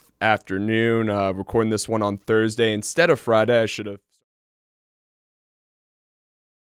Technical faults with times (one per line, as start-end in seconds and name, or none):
none